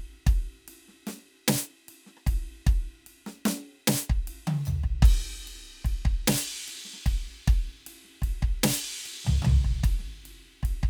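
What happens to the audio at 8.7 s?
Nothing goes wrong at 8.7 s: the music plays through that moment intact, with no dropout, click or distortion.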